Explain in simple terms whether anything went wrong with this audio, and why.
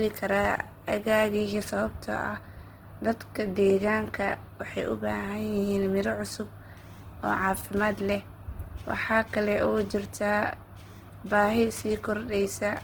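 Something did go wrong: from start to finish the speech has a rough, grainy, noisy texture. That is Opus compression damage, likely from encoding at a very low data rate, where the encoder replaces missing detail with copied or noise-like sound.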